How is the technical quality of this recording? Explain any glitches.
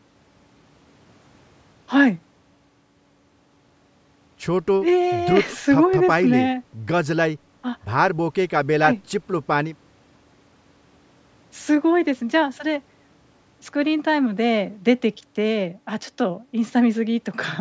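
No glitches can be heard in this recording.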